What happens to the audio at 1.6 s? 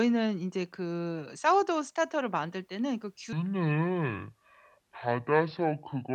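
Nothing goes wrong at 1.6 s: the speech carries on intact through that moment, with no dropout, click or other disturbance.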